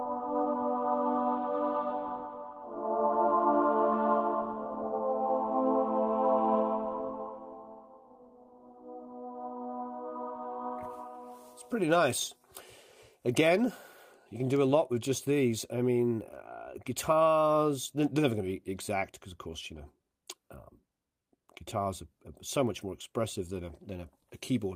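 No technical faults turn up anywhere in this recording. Nothing breaks up, drops out or distorts at any point.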